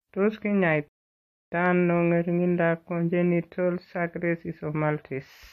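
At 0.88 s the speech cuts to silence for about 0.64 s, a rebuffering stall: the player exhausted its downloaded audio and halted until more data arrived. Playback resumes at 1.52 s on "ano ng'ering'indoab", exactly where it stopped, so nothing is lost, but 636 ms is added.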